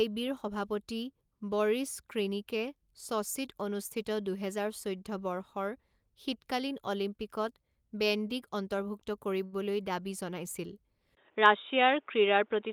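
A short stall from a late packet at 9.45 to 9.54 s in this speech clip holds one sound for about 69 ms while the receiver waits, with nothing lost. An input switch to a poorer device at 11.15 s likely explains the rest: after a 20 ms gap, nothing passes above 3.8 kHz, the level shifts by around 5 dB, and new background noise appears.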